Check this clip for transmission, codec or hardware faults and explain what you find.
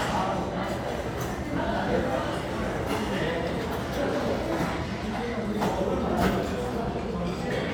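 No transmission, codec or hardware faults.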